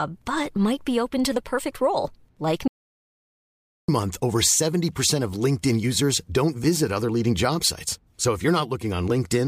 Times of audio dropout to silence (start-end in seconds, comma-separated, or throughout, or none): 2.68-3.88